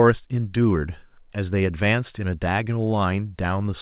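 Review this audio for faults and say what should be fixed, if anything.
Nothing here needs fixing: the speech carries the coding character of a call path and nothing above 4 kHz, which fits a G.711 A-law link at 64 kbps.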